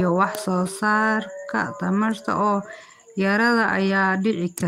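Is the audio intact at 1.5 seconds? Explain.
No. From 1.47 to 1.49 s, just before "tamarta oo", there is a lost packet rebuilt from error correction. The 20 ms stretch sounds rougher and noisier, which points to a single lost packet. The following packet carried a low-bitrate copy of that frame, and the decoder played the copy. Unlike plain loss concealment, which guesses the missing audio and smears or repeats what came before, this keeps the real speech continuous, only coarser.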